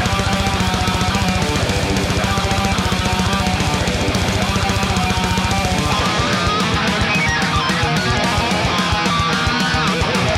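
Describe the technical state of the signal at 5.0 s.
At 5.0 s the signal is intact, with no dropout, distortion, glitch or other fault audible at that moment.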